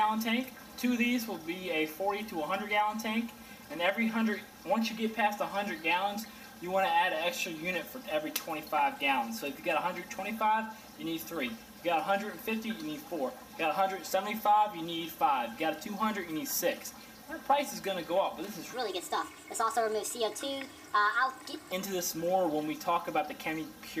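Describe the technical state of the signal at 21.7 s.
At 21.7 s the clip is at the tail of a section at the wrong speed, running from 18.74 to 21.72 s, likely from being played against the wrong clock. The sound runs 1.38 times fast, raised roughly five semitones, hurried and high.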